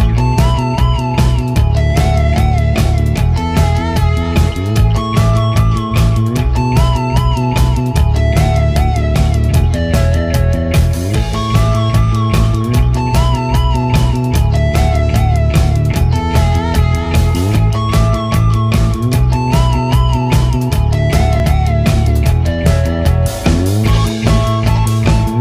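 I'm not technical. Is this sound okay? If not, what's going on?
No. The recording system most likely fell behind: it didn't collect incoming sound in time, so a small chunk was overwritten and lost. This is called a dropped buffer (overrun). The sound on either side is joined directly, with no gap, so you hear a small jump ahead. It happens at 1.56, 9.16 and 17.56 seconds, each losing about a fiftieth of a second, and at 21.4 seconds, where a longer piece goes missing.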